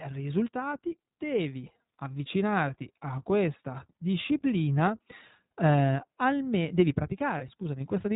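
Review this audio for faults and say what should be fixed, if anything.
iLBC codec, throughout the speech: the whole clip has been squeezed through this narrowband VoIP codec, so nothing above 4 kHz survives. The codec models each short frame's excitation on its own, which leaves the speech intelligible but plainly rough and slightly synthetic, with a dull, boxed-in top end. The frame rhythm and character fit the 15.2 kbps mode with 20 ms frames. To prevent it, carry the call on a wideband or fullband codec such as Opus.

Lost iLBC frames, 7.38 to 7.42 s: a short stretch of the speech goes missing, which fits a single 20 ms packet being dropped. The decoder fills the hole by repeating the last pitch cycle blended with noise, so instead of silence there is a brief held, faintly buzzy vowel-like tone. Because iLBC frames are coded independently, the speech snaps back cleanly right after the gap. 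To prevent it, add a jitter buffer and forward error correction or redundancy on the network path.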